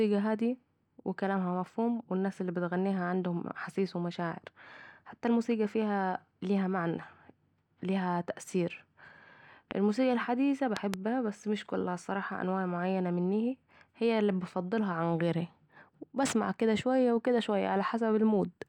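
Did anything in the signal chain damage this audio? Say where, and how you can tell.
Yes, loud pops, likely from an electrical transient in the analogue wiring. A single pop at 9.71 to 9.73 s precedes "الموسيقى الحديثه", and a double pop at 10.77 to 10.96 s sits before "بس مش كلها الصراحه". Both jump far above the speech, which continues underneath instead of dropping out.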